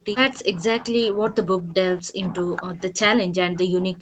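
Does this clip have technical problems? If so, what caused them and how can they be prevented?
Yes. The speech drops hard, by about 40 dB at its deepest, from 0 to 0.15 s, 0.34 to 0.62 s, 0.81 to 1.83 s, and 2.01 s to the end. That's likely speech suppressed in double talk: the echo canceller couldn't tell this talker from the far side's loudspeaker echo while both were active, so it turned everything down. A headset, or an echo canceller tuned to handle double talk better, would prevent it.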